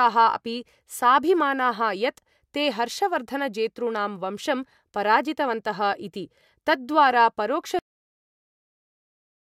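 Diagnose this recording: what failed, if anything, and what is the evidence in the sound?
The recording has a cut-off end, a failure at the storage or buffer stage: the final blocks of audio were never written out. At 7.79 s the speech stops mid-sound and drops straight to digital silence, which lasts until the end of the file. A speaker finishing or a fade would leave a decay or room tail and a low noise floor. Here the signal ends instantly and nothing follows, so the data itself is missing.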